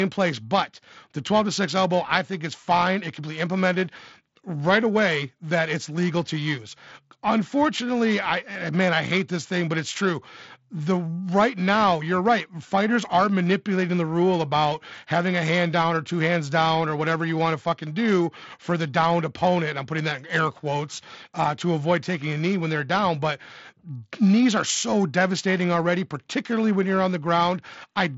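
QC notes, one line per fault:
Throughout, periodic clock jitter: interference is wobbling the converter's sampling clock at around 1 kHz, so every component of the speech carries sidebands roughly 1 kHz above and below it, strongest on higher frequencies, giving a rough, metallic edge that disappears in the pauses. The Bluetooth mSBC headset path caps the band near 7.7 kHz.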